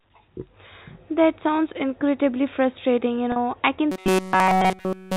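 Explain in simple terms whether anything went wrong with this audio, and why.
Two things went wrong, both near the end.

At about 3.32 to 3.36 s, roughly 40 ms of sound was lost in transit. The receiver filled the gap by repeating the last tiny cycle of the speech, which you hear as a brief held, buzzy blip. This is packet loss with pitch repetition.

From 3.92 s to the end, new audio was likely arriving too seldom, so the software kept replaying a very short snippet. That turns the speech into a rigid, metallic buzz pitched at about 188 Hz. This is robotic sound from repeated short buffers.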